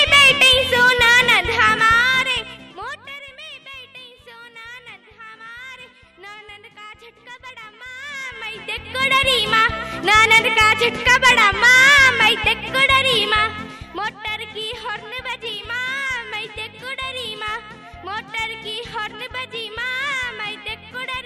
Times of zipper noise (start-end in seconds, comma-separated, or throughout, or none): 1.96-3.20, 7.98-9.26, 13.27-14.21